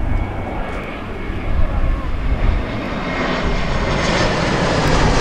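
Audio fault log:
0.84–0.86 s, 2.86–2.88 s, 4.88–4.90 s: overlapping chunks. Each 2-second chunk begins 20 ms before the previous one ends, so that sliver plays twice, giving a regular click or stutter. On a waveform, a short repeated segment appears at each join; on a spectrogram, a thin vertical broadband line.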